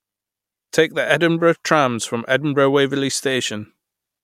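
No technical faults are audible anywhere in the speech.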